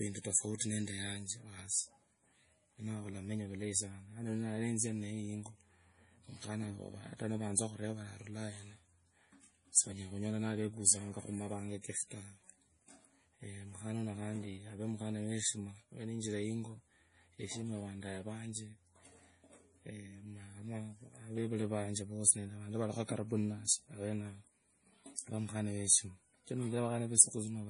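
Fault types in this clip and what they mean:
MP3 compression: The speech was likely run through an MP3 encoder starved of bits, which fits a rate near 32 kbps, so all treble above 10.6 kHz is gone and weak frequency lines flicker in and out, leaving a heavy watery, swirly smear throughout.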